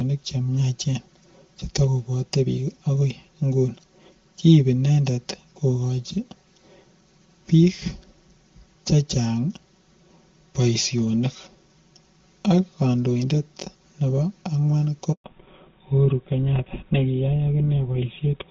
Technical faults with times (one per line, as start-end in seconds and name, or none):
0.00-18.50 channel delay (comb filtering)
15.12-15.24 handover gap
15.24-18.50 fallback to narrowband